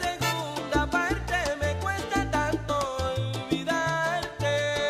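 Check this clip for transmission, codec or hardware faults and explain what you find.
One codec fault is present. Compressed frames skipped, 2.69 to 2.73 s: a few 20 ms frames never decode, so the audio jumps ahead roughly 70 ms, heard as a sudden skip at the join.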